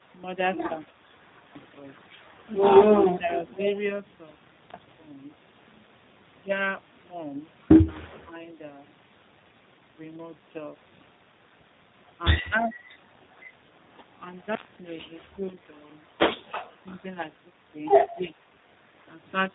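Tandem speech coding runs through the whole clip. The speech passed through two speech codecs in a row, ending in G.729A at 8 kbit/s, with G.711 between them. Each coder degraded the last one's output. Nothing remains above 3.8 kHz. The speech sounds rough, muffled and warbly.

Speech drops sharply from 3.14 to 3.57 s, by roughly 25 dB. It dips again from 12.59 to 13.17 s and from 18.18 to 18.36 s, by about 10 dB each time. This is likely speech suppressed in double talk. An echo canceller turned the talker down while the far side spoke.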